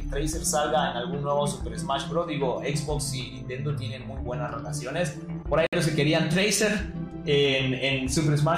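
A Bluetooth stall at 5.67 to 5.73 s drops the sound to silence for 60 ms before it resumes. The likely cause is wireless interference holding back packets, so the headphones' buffer ran empty and playback waited until the resent data arrived.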